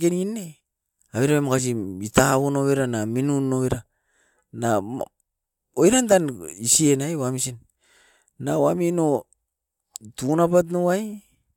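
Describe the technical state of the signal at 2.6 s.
At 2.6 s the speech signal is intact, with no dropout, clipping, glitch or other technical fault at that moment.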